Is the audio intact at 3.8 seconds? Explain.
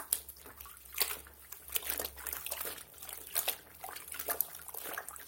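Yes, the audio is intact at 3.8 seconds, with no fault at that moment.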